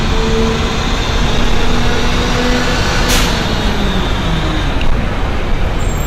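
Hard clipping runs throughout: the sound overdrives a stage by about 7 dB, flattening a small fraction of peaks and adding harsh, crackly upper harmonics.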